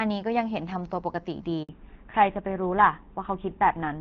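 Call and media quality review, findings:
Handover gap, 1.63 to 1.69 s: network switch during call, no speech frames delivered for 60 ms. Audio drops out abruptly, silence until new link carries sound.

Fallback to narrowband, 1.69 s onward: call left HD Voice for an older codec, consistent with GSM full rate. Content above 4 kHz gone, sound duller and rougher thereafter.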